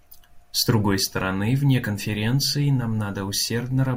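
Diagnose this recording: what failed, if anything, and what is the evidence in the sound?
Nothing in the signal chain failed: no stage shows an audible defect anywhere in the recording.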